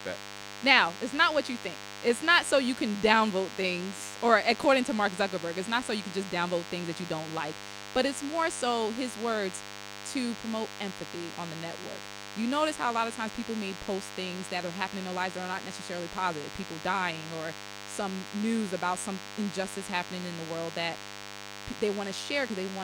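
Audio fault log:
throughout DECT cordless phone buzz: a nearby handset or base station bursts every 10 ms and the audio circuit rectifies it, giving a thin 100 Hz buzz well under the speech, seen as evenly spaced horizontal harmonic lines and a regular 10 ms comb in the waveform.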